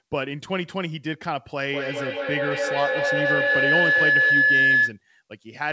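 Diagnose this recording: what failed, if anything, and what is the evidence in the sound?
Feedback howl from 1.64 s to 5.0 s, at the acoustic stage between two devices on one call. Each pass through microphone and loudspeaker adds gain, so the repeats swell into a tone near 1.5 kHz, pulsing roughly every 200 ms and peaking about 7 dB above the speech.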